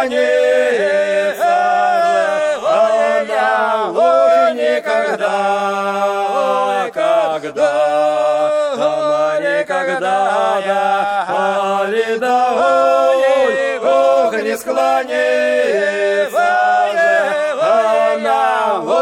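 No technical faults can be heard anywhere in this audio.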